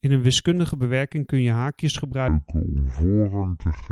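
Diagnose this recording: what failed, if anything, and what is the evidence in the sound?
From 0.0 to 2.0 s the speech has pre-emphasis left on, matching the FM 50 µs curve. The treble sits about 11 dB high at 10 kHz relative to 1 kHz, so sibilants hiss and the sound is thin and bright. The de-emphasis stage in the receive or playback path was skipped.

From 2.28 s to the end, a section is at the wrong speed. It runs at 0.602 times normal speed, dropping the pitch by roughly ten semitones, so the speech becomes deep and dragging. The likely cause is a playback or editing stage resampling against the wrong clock rate.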